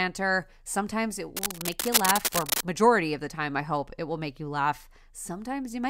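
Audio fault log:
1.36–2.61 s, cable scratch noise: a burst of dense, uneven crackling and rustling sits over the speech, roughly as loud as the speech itself, ending just before "majority of the time". It likely comes from a worn cable or connector being moved. On a spectrogram it shows as a broadband, patchy smear, and on the waveform as ragged, spiky bursts.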